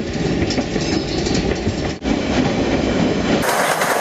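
From 3.43 s to the end at 4.01 s, the sound jumps to about 2.76 times its speed and about 17.6 semitones higher. This is a wrong sample rate fault: material recorded at 16 kHz is played at 44.1 kHz without conversion, so speed and pitch rise together.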